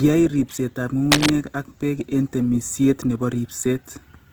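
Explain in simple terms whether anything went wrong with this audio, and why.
Throughout the recording, the speech sounds rough and grainy, with a noisy edge to it. This is likely Opus compression: squeezed hard to save data, the codec keeps each frequency band's overall loudness but fills in missing detail with approximations and noise.

From 1.11 to 1.30 s, a brief burst of scratching, rustling noise sits over the speech, about as loud as the speech itself. This is cable scratch noise, likely from a worn cable or connector being moved, causing its electrical contact to flicker rapidly.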